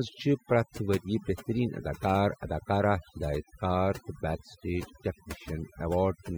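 Speech processed with overdone noise removal across the whole clip. The reduction was set too aggressively, so frequency bands sitting near the estimated noise floor are pulled down or gated off entirely, taking low-level speech detail with them. The background drops and breaks up into twinkling specks.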